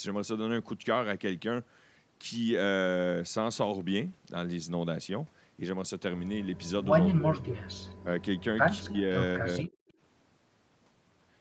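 From 6.46 to 6.69 s an echo leak appears: a faint delayed copy of the speech trailing the original by about 212 ms, roughly 35 dB down. This is likely a far-end loudspeaker feeding its microphone while the echo canceller fails to remove all of it, so part of the signal returns. A second, stronger leak runs from 7.39 to 8.41 s at about 30 dB below the speech, with the same delay near 213 ms. A brief one follows at 8.89 to 8.93 s, again around 215 ms behind. The near-constant delay points to a single acoustic return path.

Overlapping these are three episodes of speech suppressed in double talk, likely because the canceller could not separate the local talker from the returning echo and attenuated both. From 7.1 to 7.6 s the level sags by up to about 20 dB over roughly 0.4 s of the span. A shallower dip of about 10 dB occurs from 8.0 to 8.07 s. From 8.8 to 9.79 s the speech drops by up to about 20 dB again, with roughly 0.7 s affected. 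These sound like pumping or missing pieces of the speech rather than a steady fade. The audio sits within an 8 kHz band throughout, as set by the call path.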